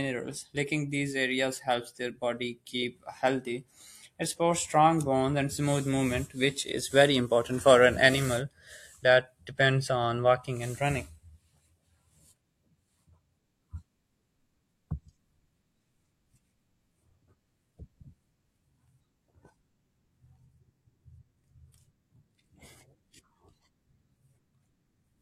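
No technical faults can be heard anywhere in the recording.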